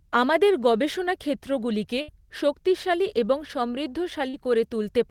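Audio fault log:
2.01–2.09 s, burst of packet loss: roughly 70 ms of consecutive packets missed their playout deadline, so the receiver stretched the last sound while fading it down. The gap becomes a held, dimming buzz or hiss, then speech resumes with that stretch gone.
4.29–4.34 s, short concealed packet loss: about 40 ms of audio never reached the decoder in time. The receiver patched the hole by extending the preceding sound and blending back into the real signal, which leaves a brief smear in the speech.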